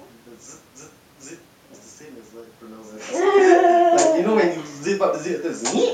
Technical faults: none

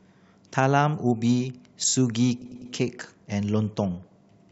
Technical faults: repeated frames

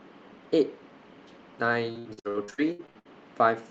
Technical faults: repeated packet loss (robotic sound)

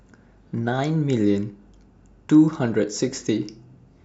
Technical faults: none

